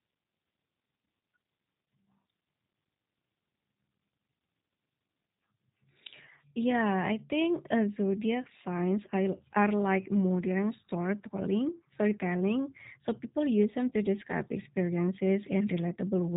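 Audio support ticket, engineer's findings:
G.729 codec, throughout the speech. Band hard-limited, nothing above 3.8 kHz; sibilants dull, top end missing. Codec damage plainly audible: slightly rough, synthetic texture on the speech.

Cause: low-rate CELP voice codec, sound consistent with G.729A, fits an 8 kbit/s VoIP leg. Speech rebuilt from a vocal tract filter, pitch predictor and sparse pulses per 10 ms frame, not the original waveform, hence the roughness.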